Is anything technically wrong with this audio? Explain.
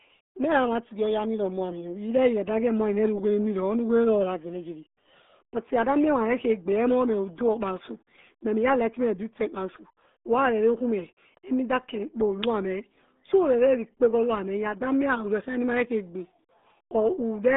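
Yes, the whole clip has been through the RealAudio 14.4 codec. The speech is muffled and gargly from start to finish, with nothing above 3.8 kHz and the band squeezed to roughly 200 Hz to 3.6 kHz. That heavy damage fits a dial-up-era 8 kbit/s speech coder.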